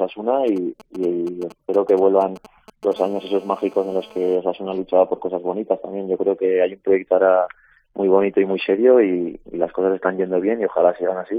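From 0.48 to 2.94 s there are GSM signalling bursts: a nearby 2G handset is exchanging short control transmissions, and the audio circuitry rectifies the radio pulses into the signal path. The result is a galloping dit-dit-dit of brief buzzes with a repetition rate near 217 Hz. The bursts arrive in clumps rather than continuously and sit roughly 20 dB below the wanted sound.

At 2.96 s the pattern changes to steady GSM phone buzz, which continues until 4.35 s. The handset has moved into a call and now transmits its time slots without interruption, about 217 times per second. Rectification of that regular pulse train produces a hard, raspy 217 Hz tone rich in harmonics. It is unrelated to the programme material and sits about 27 dB below it.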